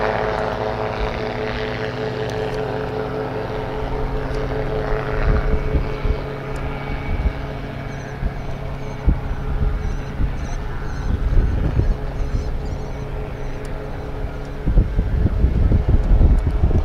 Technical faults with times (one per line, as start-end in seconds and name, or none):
none